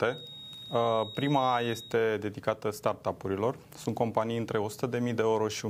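A feedback whistle runs from 0.0 to 2.0 s: a thin, steady tone at 3.8 kHz sitting roughly 15 dB below the main sound, its level slowly swelling and fading before it stops. The likely cause is a loudspeaker-to-microphone loop held just at the edge of instability, with gain high enough for that one frequency to keep circulating and sustain itself, but not high enough for it to build into a howl.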